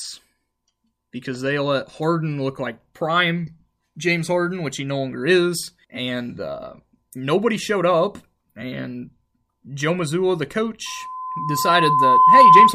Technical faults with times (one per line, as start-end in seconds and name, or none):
10.86-12.74 loudspeaker feedback squeal